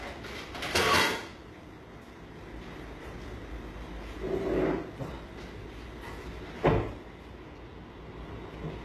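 From start to finish the audio has likely been through HE-AAC compression at a very low bitrate, with the damage plainly audible and consistent with something near 16 kbps. The codec keeps only the lower spectrum and regenerates the treble by copying lower bands upward, so the highs are synthetic and nothing reaches above 12.3 kHz. Bright, hissy and transient detail sounds gritty and metallic, with harmonics that no longer line up at the crossover.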